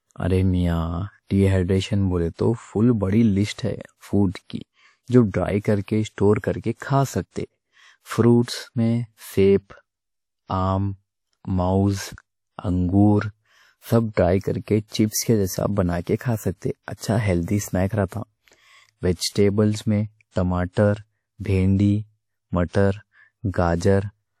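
Throughout the speech, energy stops abruptly at 19 kHz, drawn as a flat ceiling across the whole spectrogram, and the lossy smearing of a lean first encode stays audible. The likely cause is low-bitrate audio saved at a high bitrate: a high-rate MP3 made from a low-rate WMA-style source cannot restore what that source discarded.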